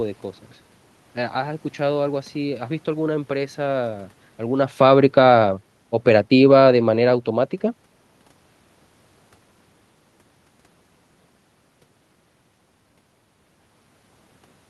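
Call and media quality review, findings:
Automatic gain falling, 6.0–7.56 s. Level sinks about 3 dB over 1.56 s, with room noise dropping along with the speech. AGC stage judged input too loud or its background noise too strong and backed its gain off gradually. Distinct from talker movement around 4.5 s and 14 s, where speech level shifts but the background holds steady. Band tops out near 12 kHz, consistent with an Opus call leg.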